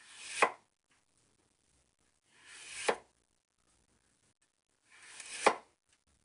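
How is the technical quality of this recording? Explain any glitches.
The recording has plainly audible codec damage throughout. 4-bit ADPCM compression affects the whole clip. Each sample is stored as a coarse 4-bit step from a prediction, so a gritty hiss follows every loud sound and sharp attacks distort. Nothing sounds above 10.6 kHz, which suggests about an 89 kbps stream. A spectrogram would show level-tracking noise under a hard ceiling at 10.6 kHz.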